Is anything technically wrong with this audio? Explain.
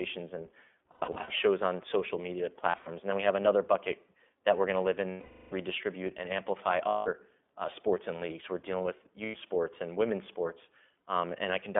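Yes. Two faults are audible.

The whole clip carries iLBC codec damage, and it is plainly audible. The speech sits in a narrow telephone band, about 250 Hz to 3.5 kHz. It sounds rough and slightly synthetic. The 20 ms framing fits iLBC's 15.2 kbps mode.

There are lost iLBC frames at 0.92–1.30 s, 2.70–2.89 s, 5.10–5.53 s, 6.88–7.09 s and 9.24–9.37 s. The decoder fills each gap by repeating the last pitch cycle with added noise. These gaps sound like a held, buzzy vowel. The longest gap, at 5.10 s, covers 420 ms of missing audio. The speech recovers almost immediately after each gap.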